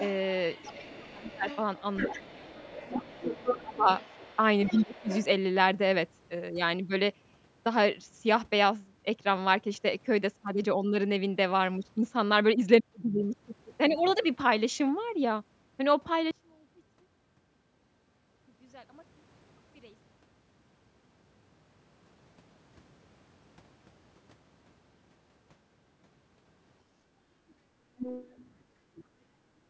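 From 0.0 to 5.26 s a second voice sits behind the main speech, about 15 dB below it. This is the other side's voice leaking through, likely because the far end's loudspeaker output reached the microphone and the echo canceller left a residue. It returns from 27.97 to 29.04 s at a similar level. The band is capped at 8 kHz throughout, as the call microphone processing shapes it.

Within that first stretch the main speech itself is pulled down twice: from 0.72 to 1.46 s, dropping by roughly 25 dB at its deepest, and from 2.11 to 5.09 s, where about one and a half seconds in total are hit in pieces, by up to roughly 20 dB. This is speech suppressed in double talk, likely the echo canceller attenuating everything when it could not separate the near talker from the echo.

From 16.31 to 22.06 s the level collapses by about 30 dB, leaving only a faint residue of the sound. The likely cause is one channel inverted: with one stereo channel in reversed polarity, the material common to both channels cancels when they are summed to mono, so centred content such as the voice nearly disappears. 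Only the small difference between the channels remains audible.

From 28.64 to 28.96 s, overlapping the second leak, the room sound dips by about 7 dB for roughly 0.3 s and then recovers. This is background gated by the echo canceller, which clamped the microphone gain while the loudspeaker was active and then released it. It sounds like a brief hole in the ambience.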